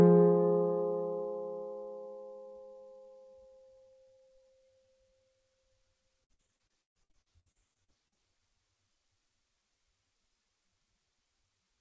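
From about 6.24 to 8.18 s there's repeated packet loss, giving that robotic sound: roughly 20 dropouts in quick succession, the longest 132 ms, each patched by stretching the last bit of sound, so about a third of that stretch comes out choppy. The band stops at 8 kHz, which fits a G.722 call codec.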